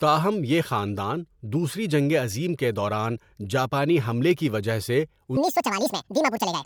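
From 5.37 s, right after "حملے کی وجہ سے", the speech abruptly turns high and hurried and stays that way until the clip ends at 6.66 s. This is a section at the wrong speed: the final stretch plays back about 1.83 times faster than it was recorded, lifting pitch by roughly ten semitones along with the tempo. The likely cause is an editing or playback step that clocked this portion at the wrong rate, so timing and pitch shift together.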